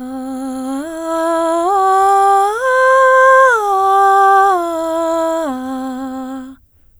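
No technical faults can be heard in this music clip. There is nothing to point to at any moment in it.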